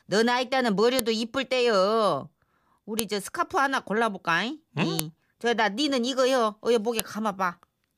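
Separate two-second WAV pieces of this speech clip were joined or streamed without their headers being stripped, so each header's few dozen bytes are played back as though they were samples. The result is file header played as audio: a sharp, loud click or snap at 0.99, 2.99, 4.99 and 7.00 s, one at the start of every piece, cutting through the speech regardless of what it is doing at that instant.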